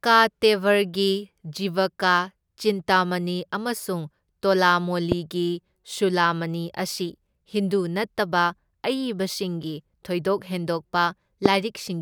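At 5.12–5.14 s and 11.46–11.48 s, single loud pops roughly 15 and 20 dB above the speech, likely voltage spikes, thump over it while the speech continues uninterrupted, unlike dropouts.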